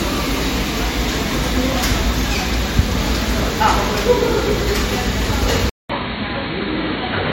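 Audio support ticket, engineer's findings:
Low-bitrate audio saved at a high bitrate, whole clip. Nothing above 16.6 kHz. Smeared, swirly MP3 artefacts on transients and texture. The file's high nominal rate doesn't match what's audible. Likely cause: a low-rate MP3, consistent with around 64 kbit/s, re-encoded as a high-rate MP3, around 256 kbit/s. The second pass cannot restore the discarded detail. The first encoder's cut-off and artefacts carry through. Fix: source the original, not a transcode.

Input switched to a poorer device at 5.70 s, lasting to the end. A gap of 200 ms at the switch. Band narrows sharply, nothing above 4.4 kHz. Tone goes dull and boxy. Level drops about 5 dB. A new noise floor appears, roughly 55 dB down. Likely cause: capture moved mid-recording to a narrower-band input, such as a headset call profile. Check device selection and auto-switching settings.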